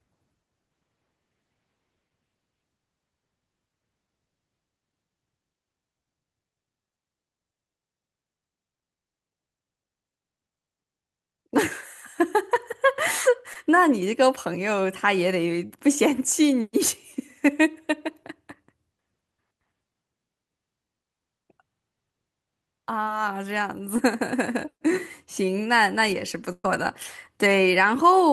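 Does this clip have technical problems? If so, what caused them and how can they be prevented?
Yes. The speech has short concealed packet loss at 13.53–13.57 s, 15.67–15.72 s, 23.04–23.08 s and 23.96–24.00 s. At each point 20 to 40 ms of the stream never reached the decoder in time. The receiver extended the preceding sound for 13 to 32 ms and blended back into real audio, which leaves a brief smear or wobble. Prevention: a larger adaptive jitter buffer and forward error correction let isolated lost packets be recovered instead of guessed.

A burst of packet loss runs from 26.52 to 26.66 s, where about 120 ms of consecutive audio went missing. The decoder extended the last sound for 121 ms and faded it, so it becomes a held buzz or fading hiss, with 40 ms of silence before playback resumes further along, with the intervening audio gone. Prevention: reduce congestion on the path and prioritise voice traffic with QoS marking, so runs of packets are not dropped together.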